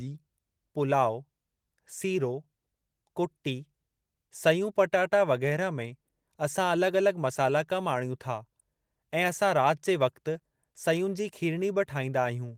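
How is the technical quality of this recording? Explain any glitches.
I can't hear any glitches in this speech recording.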